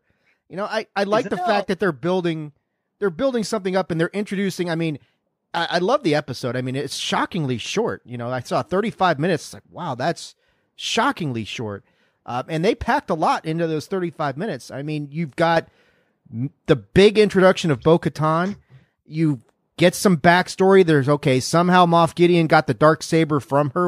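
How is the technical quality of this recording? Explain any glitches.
The recording has one clear glitch: a sudden gain jump. At 15.57 s, right after "minutes I mean you've", the level steps up by about 6 dB and stays there until the end. Speech and background noise rise together. The likely cause is a digital gain setting applied instantly, from one sample to the next, with no ramp. The result sounds like someone abruptly turned the volume up.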